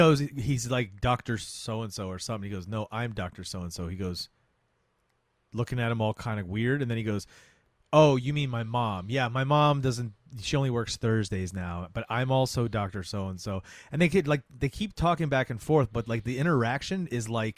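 Nothing goes wrong anywhere in this speech recording, so there's no technical fault to point out.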